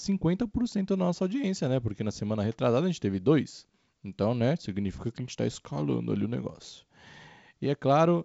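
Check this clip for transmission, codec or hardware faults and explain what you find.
No transmission, codec or hardware faults turn up anywhere in the speech. What can be heard is the G.722 wideband telephone coding at 56 kbit/s, with nothing above about 7.7 kHz, a faint hiss in the upper band, and slightly noisier low-band detail from the reduced bitrate.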